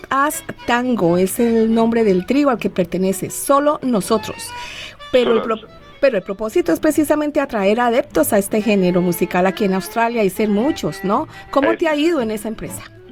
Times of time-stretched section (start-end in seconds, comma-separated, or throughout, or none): none